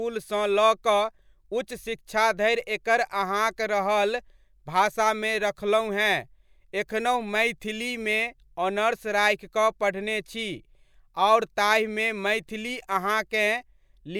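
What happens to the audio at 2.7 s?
Nothing goes wrong at 2.7 s; the speech carries on without any dropout, click or other fault at that point.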